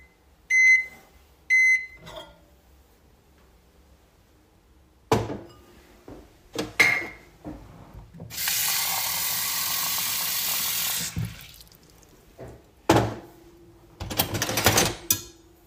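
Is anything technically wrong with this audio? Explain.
Yes. At 4.55 s there is an overlap between stream segments. Two segments carried overlapping time stamps, and the player trimmed the overlap from audio that was not actually doubled. A few milliseconds vanished. The waveform jumps there, heard as a tiny skip.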